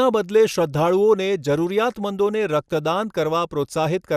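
Throughout the speech, the sound is dull and carries a gurgling, granular roughness, with upper bands flickering in and out. The likely cause is MP2 compression starved of bits, consistent with around 80 kbps. Unlike a steady low-pass filter, the missing top end keeps switching on and off.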